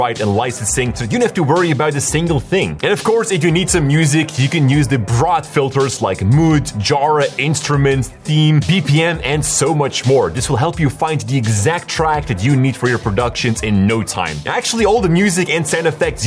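No technical faults are audible.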